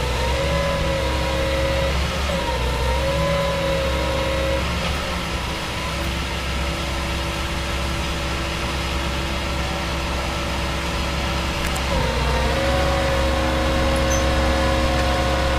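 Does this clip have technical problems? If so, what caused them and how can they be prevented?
No, there's no audible technical fault in this clip, so there's nothing to trace back or prevent.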